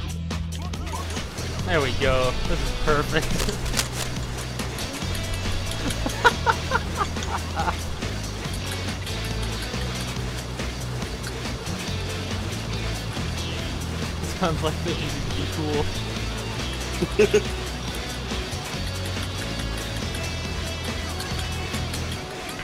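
From 3.07 to 4.07 s, dense, uneven bursts of scratching and rustling sit just below the level of the sound for about a second. This is cable scratch noise, likely from a worn cable, connector or control being moved so its contact resistance fluctuated rapidly.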